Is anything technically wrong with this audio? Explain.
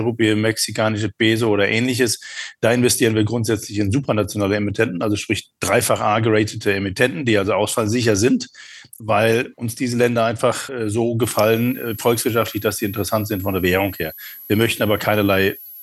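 Yes. From 11.23 s to the end at 15.82 s there is a switching supply whistle: a high tone near 11.7 to 11.8 kHz, roughly 20 dB below the audio. A switching power supply running in an audible burst mode or beating with another one leaks its switching frequency into the signal path, and the pitch wavers slightly as its load shifts.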